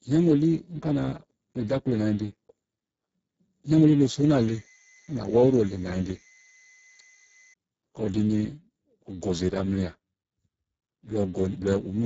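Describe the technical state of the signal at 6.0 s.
At 6.0 s you're hearing two things on top of each other. First, the whole clip carries heavy Speex codec damage. The speech has been squeezed through this CELP coder with so few bits for the excitation that it comes out hoarse, grainy and edging toward robotic, which fits a bitrate down around 6 kbps. Nothing survives above 7.7 kHz, and the top band that's left is just a shaped, noise-like fill.

Second, the moment sits inside a switching supply whistle that runs from 4.14 s to 7.54 s. A switching power supply is running in an audible burst mode or beating with another one, and it leaks through as a thin, high tone of about 2 kHz. The pitch wanders slightly, between 2.02 and 2.05 kHz, as the load shifts. It sits roughly 30 dB under the speech, so it's faint behind it.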